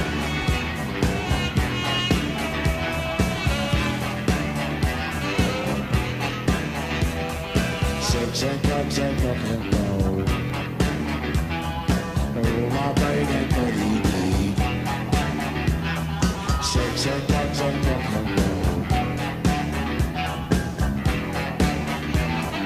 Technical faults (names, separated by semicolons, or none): periodic USB or driver dropouts